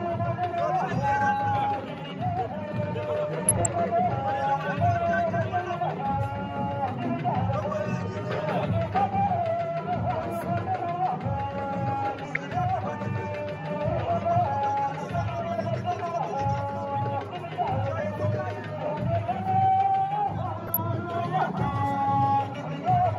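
DAB burbling occurs at 3.46–3.75, 8.13–8.40, 12.25–12.37 and 20.67–20.77 s. Bit errors slip past error correction and corrupt MP2 samples and scale factors, so single sub-bands get short noise blips and jump in level for up to a frame, giving a burbling, blippy sound. A spectrogram shows flickering, blocky, band-limited patches frame by frame.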